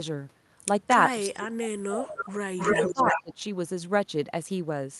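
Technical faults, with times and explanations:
1.27–2.24 s, speech suppressed in double talk: The speech sinks sharply and breaks up, dropping by as much as 30 dB at its deepest, for about a second in total. This is likely the echo canceller hearing both sides at once, failing to tell the local talker from the loudspeaker echo, and clamping everything down.
2.19–2.31 s, echo leak: A faint, delayed copy of the speech slips through, about 304 ms late and roughly 10 dB under the direct sound. The loudspeaker side's canceller likely didn't fully scrub its mic pickup, so a scrap of it came back.
2.57–3.23 s, echo leak: A stronger stretch of the same 304 ms echo, now only around 5 dB below the speech.
2.75–3.42 s, speech suppressed in double talk: Overlapping that echo, the speech dips again, about 20 dB at worst, for roughly 400 ms in total, likely as the suppressor fights the competing signal.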